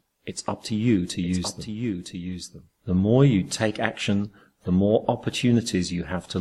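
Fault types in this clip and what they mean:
Doubled audio track: The same material is likely being mixed in a second time, either captured again through a slower path or left as two out-of-step copies in an edit. From 1.22 to 3.84 s, a full-band duplicate trails the original by about one second at roughly 5 dB lower. It carries no reverberant tail or added room colour, and it cuts in and out abruptly at those boundaries.
Corrupt frame decoded: A compressed frame arrived with flipped bits, and the decoder played it anyway. Misread codes or wrong gain values scattered energy into the wrong frequency regions for the length of that damaged frame. Around 4.62 to 4.66 s, roughly one frame's worth of audio, a brief spurious sound appears. It is misplaced energy peaking near -45 dBFS rather than the intended content, and it lasts only about 36 ms.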